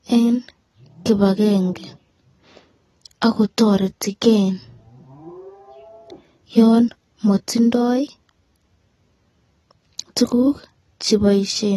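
Right through the speech there's plainly audible AAC compression, likely a low-bitrate AAC-LC encode: nothing above 12.1 kHz, with a dull, smeared, warbly sibilance.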